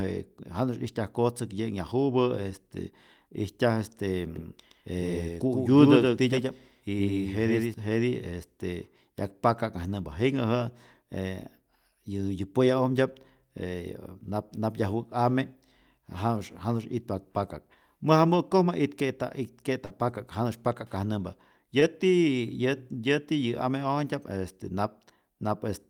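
Speech runs through the clip with three faults. From 4.36 to 7.74 s a second full-band copy trails about a tenth of a second behind, a few dB quieter, with no room colour and abrupt edges: a doubled audio track, likely from a second, slower capture path. At 19.85 to 19.92 s the last sound is continued and fades for 46 ms, then resumes with 40 ms missing, a burst of packet loss. From 21.80 to 21.83 s a brief smear replaces 20 ms of audio: short concealed packet loss, covered by 14 ms of extrapolated sound.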